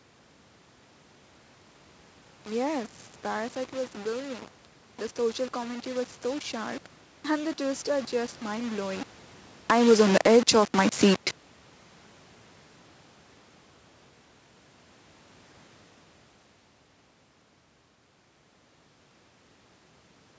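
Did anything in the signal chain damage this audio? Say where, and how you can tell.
Yes. Grainy distortion that tracks the speech sits only about 20 dB below it throughout, likely from undithered sample-format conversion, consistent with rounding to roughly 5 bits.

Automatic gain falling in the call processing: after "are just mind blowing", level and background sink together by about 4 dB from 9.55 to 11.14 s as gain is pulled down.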